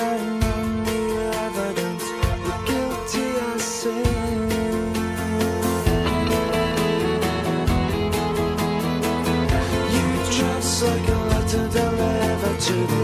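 Nothing in this clip sounds wrong; it just runs along without a single glitch, dropout or odd noise getting in the way.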